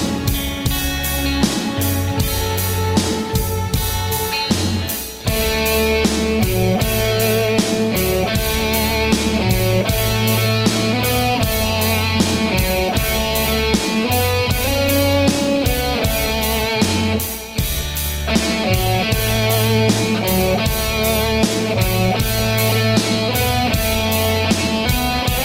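Listening through the recording, nothing stood out as a technical problem at any point.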